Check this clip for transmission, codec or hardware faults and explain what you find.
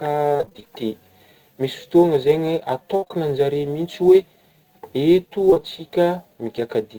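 Four kinds of fault show up: a low-level roughness from sample clock jitter across the whole clip, a choppy robotic patch near the start, a burst of packet loss that runs straight into further short dropouts around 3 seconds, and another pair of short dropouts near 5.5 seconds.

Sample clock jitter is present throughout. The converter's clock wanders on the order of 7 microseconds, so each sample is taken at a slightly wrong moment. The error grows where the waveform changes fastest, leaving a grainy hiss roughly 35 dB below the signal that thickens on loud and bright parts of the speech and disappears in pauses. On a spectrogram it appears as a faint noise haze riding under the energetic regions, strongest at high frequencies, with clean gaps wherever the speech stops.

Repeated packet loss (robotic sound) runs from 0.33 to 0.68 s. Over that span the stream keeps dropping out in short holes, the longest about 24 ms. 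The receiver fills each one by stretching the last bit of sound before the next hole arrives, so nearly half of the stretch is synthesised. The result is choppy speech with fragments missing. On a spectrogram it looks like a stuttering comb: repeated smeared or duplicated slices alternating with real audio, and the waveform shows an irregular, chopped envelope.

A burst of packet loss occurs from 2.96 to 3.04 s and removes about 60 ms. The decoder continues the last sound and fades it down, so voiced material turns into a brief held buzz, and unvoiced material turns into dying hiss. Speech then resumes a little further on, with the part in between missing. On a spectrogram this shows as horizontally smeared harmonics that fade out. In the waveform it looks like a decaying, unnaturally regular stretch.

Short concealed packet loss follows straight on at 3.04 to 3.08 s and 3.08 to 3.12 s, so the damage around 3 seconds extends to roughly 160 ms in total. 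It occurs again at 5.50 to 5.54 s and 5.54 to 5.58 s. Each hole is about 20 ms, patched from the preceding pitch or as shaped noise and then blended back into the real audio. These are heard as quick smears or wobbles, and a short consonant can vanish. On a spectrogram each appears as a narrow band of copied or blurred frames, with a small discontinuity in the waveform where the real signal returns.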